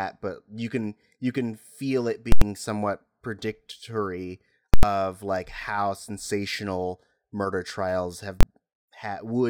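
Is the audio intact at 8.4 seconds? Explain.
No. From 8.41 to 8.43 s the clip hits invalid numbers at full scale. A calculation produced infinite or invalid values, and these were clamped to the largest value the format can hold. The output sits pinned at one extreme value, far beyond the speech's peaks, for about 23 ms, which fits a 1024-sample processing block. That stretch is too short to hear as a gap. It comes across as a single very loud bang.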